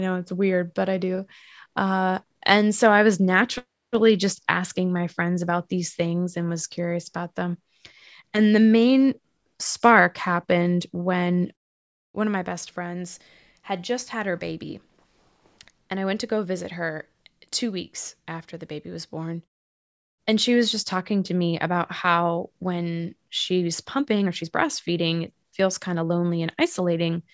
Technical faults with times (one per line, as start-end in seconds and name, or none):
none